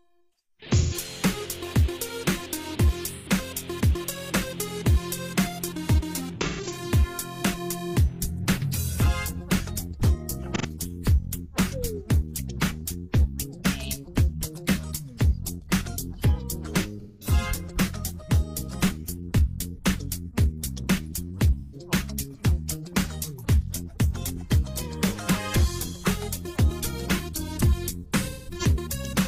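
AAC frame loss with concealment recurs at 0.72, 3.10, 6.41, 10.55, 17.00, 21.60 and 28.19 s, each a smeared, noisy or phasey patch of about 85 to 256 ms where the decoder rebuilt missing blocks from the last good spectrum. At 6.41 and 28.19 s the losses are scattered over roughly 340 and 430 ms, with runs near 100 and 150 ms. Unlike a plain dropout, nothing cuts to silence; the sound blurs rather than stopping.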